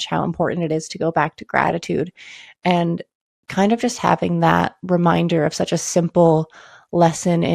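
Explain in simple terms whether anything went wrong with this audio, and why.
The whole clip sounds dull and gurgly with a grainy edge, likely from heavy MP2 compression shutting off the upper frequency bands to save space.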